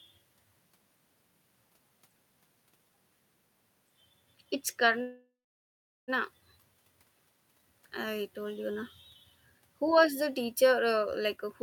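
A call audio freeze runs from 5.01 to 6.10 s. The last sound is stretched into a fading buzz or hiss that collapses into silence for about 760 ms, and then the speech resumes exactly where it left off. Roughly 1.06 s of filler has been inserted and nothing is lost, so everything after it arrives that much later. The likely cause is that packets stalled in transit and the jitter buffer drained.

A jitter buffer speed-up runs from 11.36 s to the end at 11.63 s. Delayed packets appear to have arrived in a bunch and overfilled the buffer. To shed the excess delay, the receiver repeatedly cut out tiny slices of one or a few pitch periods, removing around 70 ms in total. The speech plays at about 122 % of normal speed while keeping its pitch, so the final moment sounds rushed.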